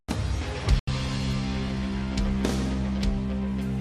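At 0.79 s a burst of packet loss interrupts the audio for about 100 ms, ending at 0.89 s. Several consecutive packets never arrived in time, so the receiver concealed the hole by extending the last sound it had and steadily attenuating it, about 80 ms of synthetic fill that decays rather than stops abruptly. When real packets return at 0.89 s, playback jumps ahead, leaving roughly 80 ms of the original material missing.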